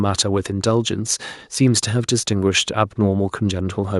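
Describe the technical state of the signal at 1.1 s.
At 1.1 s the speech signal is intact, with no dropout, distortion, glitch or other technical fault at that moment.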